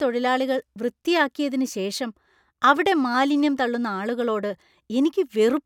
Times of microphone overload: none

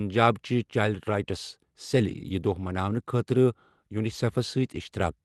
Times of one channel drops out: none

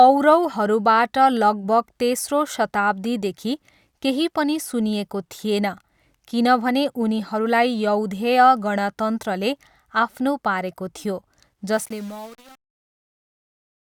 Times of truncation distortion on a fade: 11.73-13.93

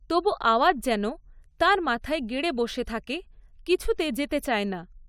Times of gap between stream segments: none

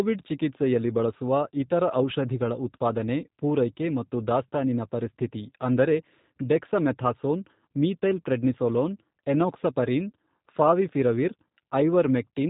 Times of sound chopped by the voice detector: none

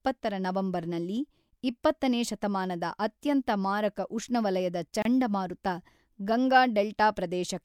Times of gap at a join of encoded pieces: 5.02-5.05

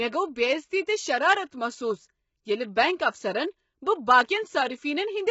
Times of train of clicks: none

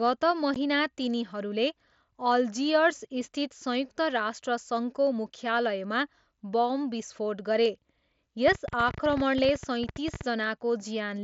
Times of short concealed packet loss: none

